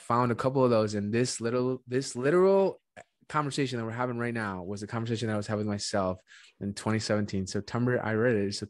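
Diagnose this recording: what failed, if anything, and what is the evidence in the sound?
Nothing failed, and the sound carries no evidence of a fault at any stage.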